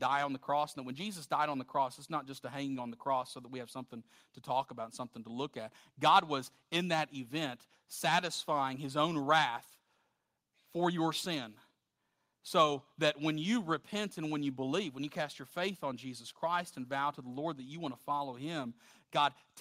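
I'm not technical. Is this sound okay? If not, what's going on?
Yes, nothing in this recording points to a technical problem: the signal comes through steady and intact, with no dropouts, distortion or glitches anywhere in it.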